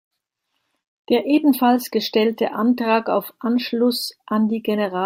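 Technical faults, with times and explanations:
No technical faults can be heard in this recording.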